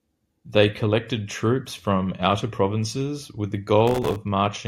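Processor overload crackle runs from 3.88 to 4.16 s, just after "outer provinces with the". For that stretch the processor falls behind and keeps missing the deadlines for very short buffers, each around a millisecond and a half. Dozens of them go unfilled and drop out as hard-edged slivers of silence. The rapid string of tiny gaps chops into the speech and comes across as a gritty, tearing crackle laid over it, which ends once the load eases.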